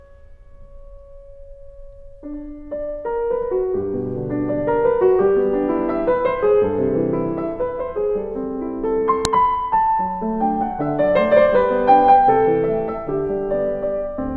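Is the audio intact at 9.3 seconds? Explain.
No. At 9.25 s the file header was played as audio: a stray WAV header was left in where two pieces of audio were joined, and its few dozen bytes were read as sample values. They sound as one sharp, loud click just before 9.3 s.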